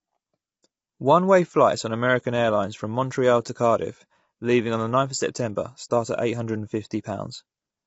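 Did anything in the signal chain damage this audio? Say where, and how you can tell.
Yes, at the codec stage, throughout the speech: a rough, grainy texture with a hard spectral ceiling at 7.8 kHz, likely low-delay AAC compression at around 24 kbps. On a spectrogram, the harmonic striations look smeared and noise-filled between bands, because too few bits leave coarse quantization noise between the harmonics.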